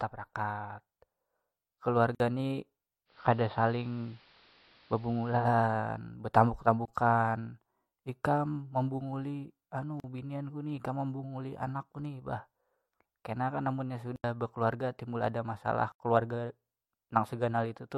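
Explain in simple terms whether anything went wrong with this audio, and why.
Several things went wrong. The recording has five blocks of digital silence, where the sound drops out completely for a moment and snaps back with no fade. They come at 2.15 s, 6.85 s, 10.0 s (after "ikam membunguli"), 14.16 s (after "kenakan amunnya"), and 15.92 s (after "bakaluarga timbul ada"). Each lasts between about 26 and 80 ms. The audio most likely wasn't delivered in time to fill those gaps.

From 3.05 s to 5.50 s there is a digital radio blending to analogue. The receiver lost its digital signal and switched over to the station's AM broadcast, taking about 150 ms to make the switch. The sound turns duller and picks up a faint hiss. Then it returns to digital.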